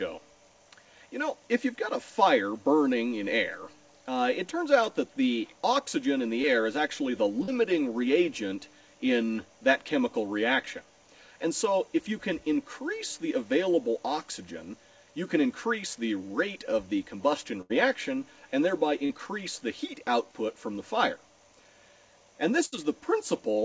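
A brief smear at 6.42 to 6.45 s, and another at 7.43 to 7.49 s, are short concealed packet loss. About 20 and 40 ms never arrived, and the decoder extended the preceding sound to fill each gap.

At 17.61 to 17.72 s the sound hangs on and fades, then resumes further on. This is a burst of packet loss. About 80 ms went missing, and the receiver stretched and attenuated the last audio across the gap.

A similar short wobble at 19.06 to 19.11 s is another concealed loss of about 40 ms.

At 22.65 to 22.85 s a second burst of packet loss bridges about 60 ms with a fading continuation, and a sliver of audio is skipped when playback resumes.

Throughout, nothing is heard above 8 kHz, which fits a wideband call codec such as G.722.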